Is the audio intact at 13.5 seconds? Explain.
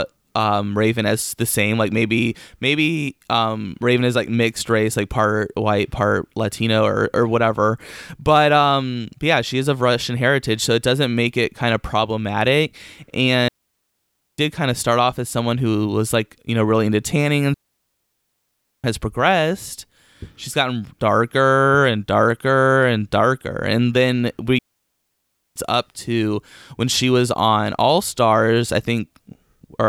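No. From 13.48 to 14.38 s the speech drops into a clean hole of near silence lasting about 0.9 s, with no noise burst on either side, before "kind of start off". This is a digital wireless dropout: the receiver lost too much data and muted quickly.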